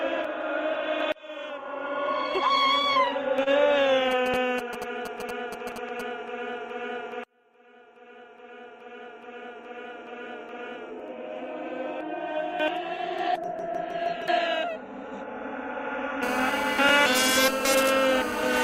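At 2.93 to 2.97 s there is a short concealed packet loss. About 20 ms of the stream never reached the decoder in time, so the receiver invented roughly 22 ms to cover the gap. It carried the preceding sound forward, either from its pitch or as shaped noise, then faded back into the real signal. The result is a brief smear or wobble where that fragment of audio is gone.

At 3.43 to 3.48 s comes a short stall from a late packet. A packet arrived late, the jitter buffer drained, and the receiver stretched the last sound by about 29 ms while waiting. It then resumed exactly where it had stopped, so nothing is lost, but the timing shifts later by that amount. The sound at that point is held too long, with a momentary buzz or dip.

From 4.11 to 6.01 s, GSM signalling bursts intrude. A nearby 2G phone was exchanging signalling with the network, sending short groups of radio bursts. The audio circuitry rectified them into audible pulses, heard as a galloping dit-dit-dit of brief 217 Hz buzzes, around 10 dB below the wanted sound. 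They stop after about two seconds.

From 16.23 s to the end, a GSM phone buzz appears, from a 2G phone in an active call. Its transmitter pulses 217 times a second, and the audio path demodulates those pulses into a hard, raspy 217 Hz tone rich in harmonics. The tone is unrelated to the sound it overlays and sits about 9 dB below it. It continues through the clip's final seconds.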